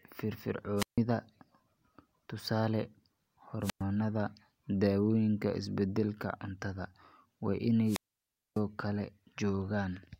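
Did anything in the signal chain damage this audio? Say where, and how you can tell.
Yes. Three wireless microphone squelch dropouts, at the radio link before any converter: 0.77–0.98 s (about 150 ms mute), 3.61–3.83 s (about 110 ms) and 7.85–8.61 s (about 600 ms). Each has a hiss burst, a silent hole and returning speech, as the receiver's squelch mutes a fading FM signal.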